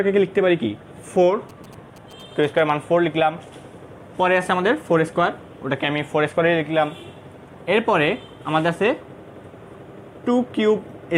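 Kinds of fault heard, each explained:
GSM signalling bursts: A nearby 2G phone exchanging short signalling bursts, picked up and rectified by the audio circuitry. From 1.49 to 2.6 s it shows as a galloping dit-dit-dit of short 217 Hz buzzes, sitting roughly 25 dB below the sound.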